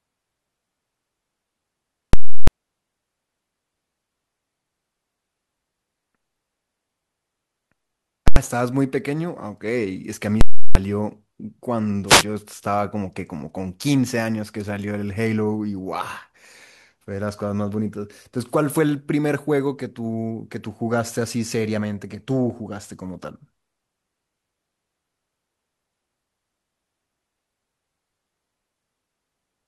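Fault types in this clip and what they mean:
Invalid numbers at full scale: A calculation in the chain produced infinite or invalid values that were pinned to maximum level for whole blocks. The 0.34 s blocks at 2.13 s and 10.41 s give a loud pop at each edge with silence between. The 0.09 s block at 8.28 s is a single bang. The lengths fit 16384- and 4096-sample blocks, unlike clipping, which follows the waveform.
Wireless microphone noise hit: The radio link of an analogue FM microphone faded as reflected signals cancelled, so receiver noise rose over the speech. This is heard as a brief swish of static from 12.06 to 12.24 s. Unlike a digital pop or dropout, it is hiss that swells and subsides rather than a hard-edged block.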